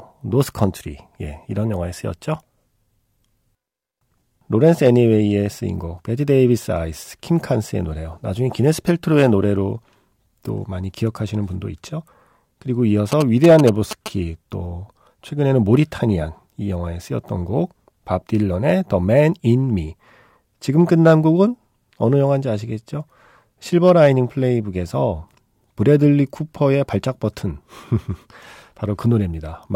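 Speech clip with GSM signalling bursts from 13.12 to 14.08 s: a galloping dit-dit-dit of short buzzes near 217 Hz, roughly 10 dB below the speech, from a nearby 2G phone whose radio bursts the audio circuit rectifies. On a spectrogram it shows as vertical stripes with harmonic bands at 217 Hz spacing; on a waveform, as clusters of sharp spikes.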